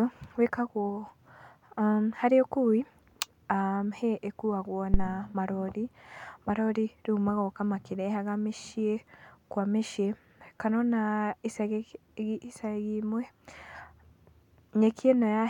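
A phantom power thump hits the speech from 4.94 s to 5.10 s. Switching the supply on or off at a live input sends a voltage step through the coupling capacitors, producing a deep thud that peaks at about −10 dBFS and decays over 36 ms.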